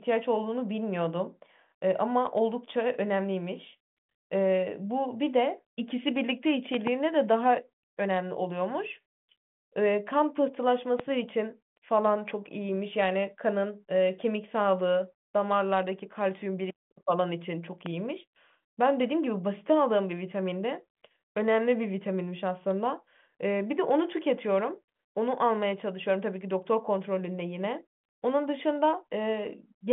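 Sharp loud pops cut through the speech: a quick double pop from 6.74 to 6.89 s, then single pops at 11.00 to 11.02 s and 17.86 to 17.88 s, each peaking about 15 dB above the sound. Each is likely a voltage pulse from a switch, plug or static discharge, briefly shaped by the circuits that follow it, while the telephone-band audio, with nothing above about 3.8 kHz, continues underneath.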